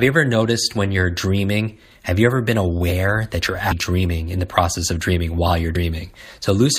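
A brief glitch at 3.70 to 3.72 s and another at 5.75 s come from damaged data in the compressed stream, where the decoder misreads corrupted frames and resynchronises.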